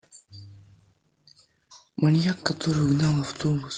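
Feedback echo between two devices runs from 2.1 s to the end of this speech clip: the speech returns at a steady interval of roughly 0.4 s, thinner and more ringing on each pass, peaking about 24 dB below the direct speech. A second device in the same room is playing the call back, and its sound re-enters the first microphone, where that device's echo canceller cannot remove it. The call path itself sounds band-limited at 12 kHz, consistent with a speech codec such as Opus at a modest bitrate.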